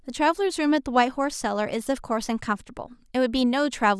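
No technical faults are audible.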